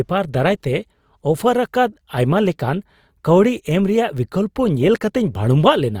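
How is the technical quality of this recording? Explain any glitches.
The quality is clearly compromised, with codec damage audible through the whole recording. From start to finish the speech sounds grainy and rough, its tones turned noisy rather than clean, though treble still extends to about 20.4 kHz. The likely cause is Opus compression in its music mode at a low bitrate near 24 kbps, where short-budget bands get filled with folded or noise energy.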